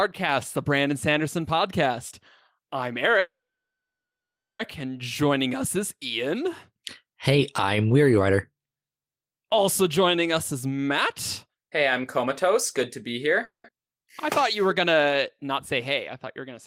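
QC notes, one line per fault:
3.19–4.62 s, call audio freeze: Right after "podcast I'm" the sound hangs. The last bit of audio carries on as a short fading buzz, then goes quiet for about 1.3 s before picking up again at "and joining us is". Nothing gets skipped. It's a 1.4 s gap pushed into the stream, so everything after runs that much later. That's likely the jitter buffer running dry while packets were held up in transit.
10.33–10.88 s and 11.46–12.56 s, jitter buffer speed-up: Two stretches where the audio sounds rushed but the pitch doesn't move. The first runs at 118% and the second at 116%. The receiver was holding more audio than it wanted, so it clipped out lots of tiny pitch-period-sized slices back to back. That's around a tenth of a second trimmed in the first stretch and around two tenths in the second, which squeezes the timing without shifting the pitch.
13.44–13.67 s, call audio freeze: A much shorter version of the first one. 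There's a brief fading tail, then about 0.13 s of silence, and the audio resumes at "I thought you were". None of the sound is lost, but a 0.2 s gap gets added to the timeline. It's likely another short run where the jitter buffer emptied while packets were delayed.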